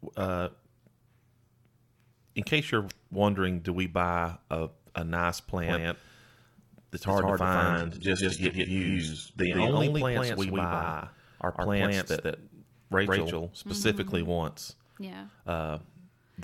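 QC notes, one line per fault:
5.63–13.87 s, doubled audio track: a second full-band copy at roughly equal level trails by about 150 ms, starting and stopping abruptly, likely a duplicated capture path.
7.72–9.72 s, adaptive stream at a lower bitrate: treble vanishes above 11.1 kHz, suddenly, without gap, which fits a switch to a low-rate HE-AAC stream.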